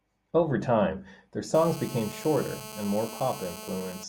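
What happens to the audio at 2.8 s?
At 2.8 s a GSM phone buzz is present, running from 1.55 s, just after "time their", to 4.04 s. A nearby 2G handset on a call bursts 217 times a second, and the audio circuitry rectifies those pulses into a steady, harsh, harmonic-rich rasp about 14 dB below the speech.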